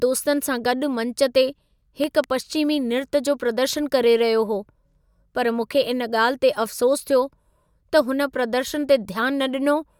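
Loud pop at 2.04 to 2.26 s: two sharp pops roughly 10 dB above the speech, which continues underneath, likely from a sudden voltage pulse, such as a switch or plug.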